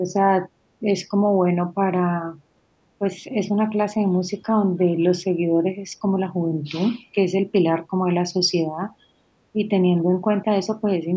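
The speech dips briefly at 0.0, 0.8, 2.99, 3.22, 7.88 and 9.53 s. Each dip is short, by roughly 5 to 10 dB. This is likely speech suppressed in double talk, where the echo canceller mistook the talker for echo. From 2.56 to 2.71 s the room sound drops by about 11 dB. This is background gated by the echo canceller, which clamps the microphone while the loudspeaker plays.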